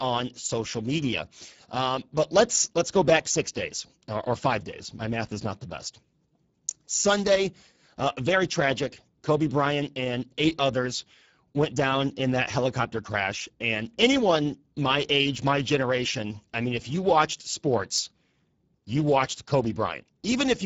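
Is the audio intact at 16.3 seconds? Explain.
No. At 16.3 s the audio passes through the Speex codec, which is active across the whole clip. Its noisy, hoarse, plainly damaged quality fits a low setting near 10 kbps, starving the excitation of bits, with nothing above 7.7 kHz.

The same moment falls inside the run of clock slip clicks from 0.26 s to 20.61 s. Two unsynchronised clocks, likely a few tens of parts per million apart, drop or repeat a single sample roughly every 0.7 s, giving faint regular ticks on the speech.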